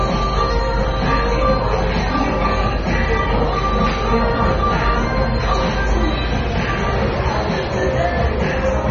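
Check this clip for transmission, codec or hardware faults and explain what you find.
Two faults are present. The audio is dull and smeared throughout, with nothing above 6.9 kHz. This is likely AAC compression, pointing to a low bitrate around 24 kbps. Mains hum runs from 0.00 to 5.60 s as a steady 50 Hz tone. It sits nearly as loud as the sound itself, coupled in from the power line.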